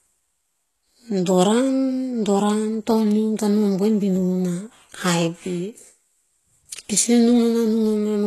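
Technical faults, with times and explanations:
Throughout, HE-AAC compression: the encoder has likely coded only the lower band at a very low bitrate and rebuilt the upper range from copied lower bands shaped by a coarse envelope. The treble is synthetic, with its harmonics not lining up across the crossover, so sibilants come out gritty, metallic or lispy. Damage is heavy, which fits a rate near 16 kbps, and nothing is present above about 12.3 kHz.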